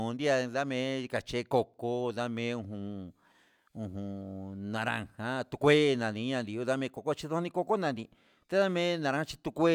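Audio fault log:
1.74 s, block of digital silence: The speech drops to silence for about 1.45 ms, then resumes. That length fits a 64-sample buffer left unfilled when the output was due. The signal jumps straight to silence and back with no fade. Each edge is a sudden step in the waveform. At this length the two steps merge into one short tick rather than an audible gap.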